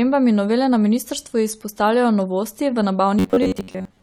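From about 3.19 s, right after "ministrstvu izpostavljajo novosti v", the speech turns into robotic sound from repeated short buffers and stays that way to the end at 4.02 s. It's a rigid, metallic buzz pinned at about 94 Hz that still loosely tracks the speech. The likely cause is late-arriving audio being covered by looping the last chunk over and over, about 10.7 ms at a time going by that pitch, so most of the real signal is skipped.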